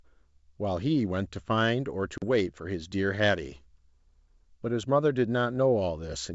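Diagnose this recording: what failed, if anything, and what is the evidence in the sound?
Packet loss on an ADPCM call, 2.18 to 2.25 s: a network fault. About 40 ms (roughly two packets) drops to hard-edged silence, then the desynchronised decoder predictor briefly distorts the G.722 speech.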